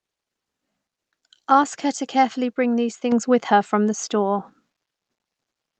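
A microphone volume step-up occurs at 3.12 s, between "to carefully bring these" and "with her from the". The call software judged the input too quiet and raised the microphone's gain by about 6 dB at once, so voice and background jump louder together mid-sentence. The call path's codec band-limits the audio to about 8 kHz.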